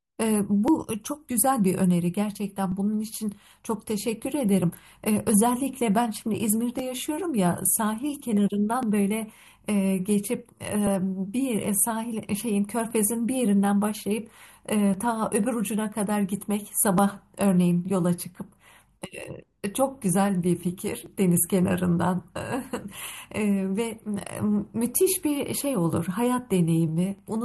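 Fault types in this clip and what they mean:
Clock drift buffer slips: likely two device clocks about 700 ppm apart, so small sample blocks slip, giving a click in the speech every 2.04 s.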